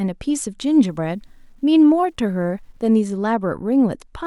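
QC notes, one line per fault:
0.64–3.00 s, low bit depth without dither: quiet speech turns gritty, grain following the voice, about 50 dB down. Likely undithered truncation to 10 bits.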